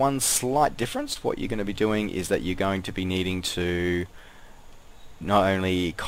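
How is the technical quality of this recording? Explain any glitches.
There is one glitch, a short concealed packet loss between 1.13 and 1.17 s. About 20 ms of audio never arrived at the decoder in time. The receiver covered the gap by extending the sound that came just before it, which filled about 18 ms. It then crossfaded back into the real signal. The result is a brief smear or wobble, where the sound holds still for an instant and then blends back.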